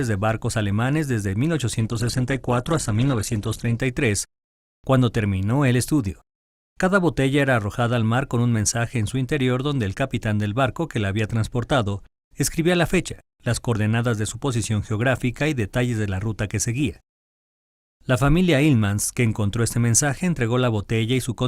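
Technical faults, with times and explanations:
1.80–3.80 s, adaptive stream at a lower bitrate: quality drops suddenly without a gap and artefacts rise, which fits a slowed connection forcing a low-bitrate Opus version.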